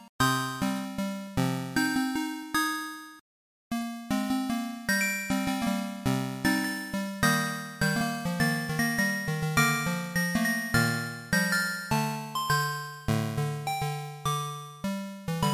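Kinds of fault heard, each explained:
No kinds of fault are heard in this sound, so there are none to explain.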